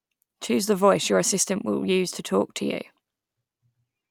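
No technical faults can be heard anywhere in the speech.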